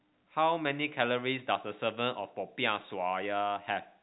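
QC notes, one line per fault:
No faults: the speech sits in a G.711 A-law telephone channel consistent with a 64 kbps line, its bandwidth ending near 3.9 kHz as that format requires and its level-following quantisation noise faint at most.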